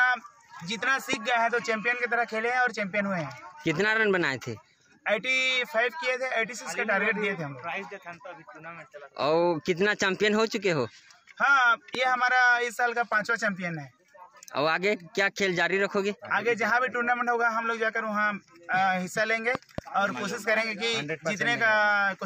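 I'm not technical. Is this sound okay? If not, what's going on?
No. There are loud pops at 1.13 s and 11.95 s, and a louder pair between 19.55 and 19.81 s. Each is a sharp thump on top of the sound, which carries on underneath. The likely cause is a sudden electrical jolt, from a plug, switch or static.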